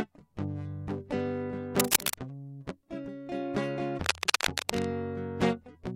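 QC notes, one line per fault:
1.76–2.14 s: cable scratch noise, a dense, irregular burst of scratchy crackle laid over the music, peaking a little above the music's own level. It is likely a worn cable or connector being moved, with its contact resistance jumping rapidly.
4.04–4.87 s: cable scratch noise again, a longer rustling patch at roughly the same level as the music. The same likely cause applies: an intermittent contact shifting under movement.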